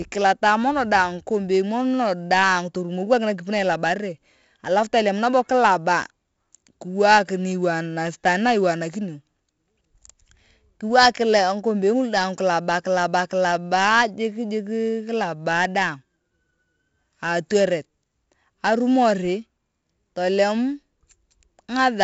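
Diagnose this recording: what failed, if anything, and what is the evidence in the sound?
The codec stage is where this went wrong. The whole recording carries heavy 4-bit ADPCM compression. Every louder stretch of speech drags a gritty hiss along with it that rises and falls with the level, because each sample is only a small coded step from a prediction. Sharp onsets crunch where the adaptive step can't grow fast enough. Nothing gets through above 7.7 kHz, which points to a 64 kbps stream: 4 bits per sample at around 16 kHz.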